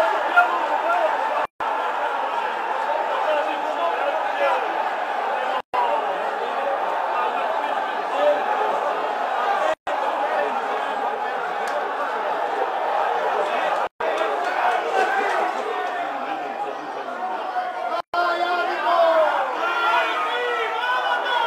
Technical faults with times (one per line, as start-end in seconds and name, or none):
1.45-1.60 gap at a join of encoded pieces
5.60-5.74 gap at a join of encoded pieces
9.74-9.87 gap at a join of encoded pieces
13.87-14.00 gap at a join of encoded pieces
18.00-18.14 gap at a join of encoded pieces